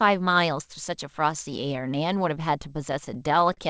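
From 2.62 to 3.59 s the speech hits repeated stalls (stutter). It catches eight times. Packets arrived late, so the jitter buffer kept running dry. The receiver stretched the last sound to cover each wait, about 105 ms in total, longest 42 ms. Nothing is lost, but the speech drags and hiccups, its band topping out at 8 kHz as G.722 call audio would.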